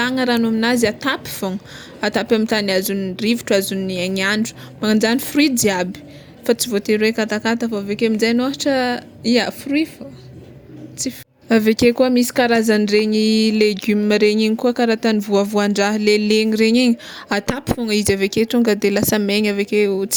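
No technical faults can be heard in this recording.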